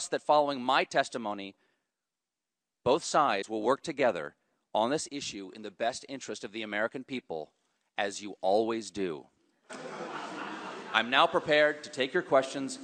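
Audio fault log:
3.41–3.44 s, broken MP3 bit reservoir: the audio skips ahead with a brief disturbance lasting about 30 ms, which fits a single MP3 frame of roughly 26 ms plus its edges. The likely cause is missing frames: a frame that follows the gap reaches back into the reservoir for data it expects in earlier frames, finds bytes belonging to a different frame, and decodes them into a short stretch of wrong sound before clean decoding resumes.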